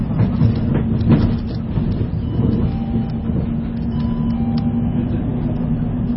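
A recording of everyday sounds carries heavy MP3 compression from start to finish. Nothing survives above 5.6 kHz, and the remaining band has a watery, swirling texture as weak frequency components drop in and out between frames, which fits a starved bitrate of around 24 kbps as the likely cause. That flickering texture separates it from a simple low-pass filter, which would dull the top without adding any swirl.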